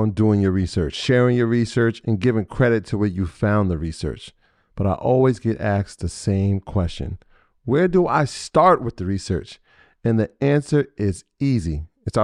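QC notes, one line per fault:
No faults heard in this speech recording.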